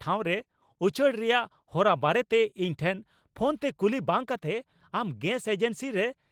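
No technical faults turn up anywhere in this speech clip.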